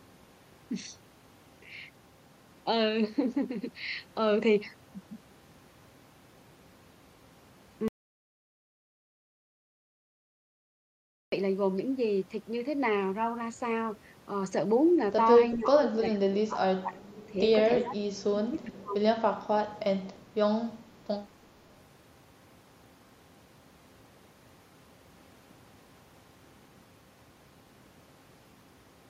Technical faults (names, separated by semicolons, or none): audio dropout to silence; speech suppressed in double talk